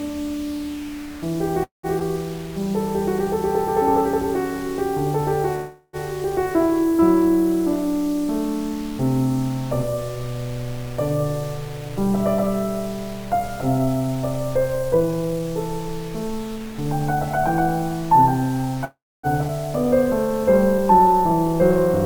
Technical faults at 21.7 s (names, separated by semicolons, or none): jitter buffer slow-down